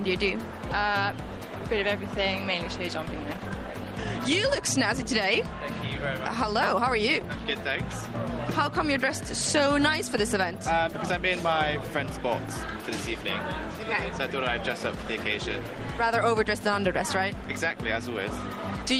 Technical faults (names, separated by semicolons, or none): skip ahead; jitter buffer speed-up